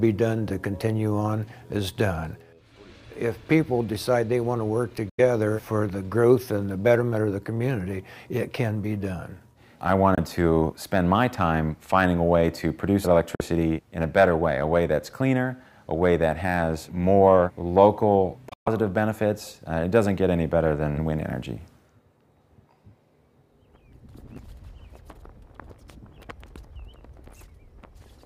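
The audio drops to silence four times, at 5.09–5.20 s, 10.15–10.18 s, 13.35–13.41 s and 18.49–18.68 s, the last a broken cluster with one 128 ms gap. Each hole has abrupt edges or a fade of a few milliseconds and playback resumes further on, which points to a likely Bluetooth dropout from packets arriving too late.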